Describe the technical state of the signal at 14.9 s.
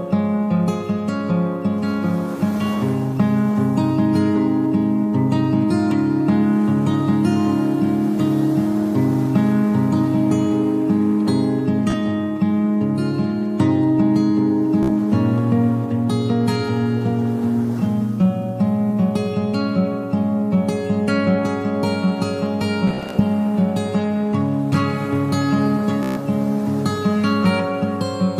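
A Bluetooth stutter runs from 14.83 to 14.90 s. Packets arrived late or not at all, so the receiver replayed its last slice of audio. That short repeat gives a brief machine-gun buzz. About 61 ms of sound is skipped before playback resumes.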